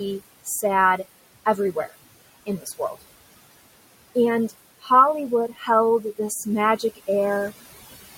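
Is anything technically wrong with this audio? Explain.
Yes. Throughout the clip the background pumps: between phrases it sinks away, then surges back underneath the speech. These are noise suppressor artifacts. The suppressor estimates the steady room noise, which sits about 17 dB below the speech, and pulls down each frequency band it judges to be noise, frame by frame, by about 19 dB here, so the residue fluctuates unevenly.

The same processing also causes speech cut by the noise suppressor, at 2.46 to 3.02 s and again at 5.48 to 5.68 s. In each spot part of the speech goes faint and swallowed, with roughly a fifth of a second of sound affected in each. The suppressor mistook those quieter speech moments for background and turned them down with it, by as much as about 16 dB.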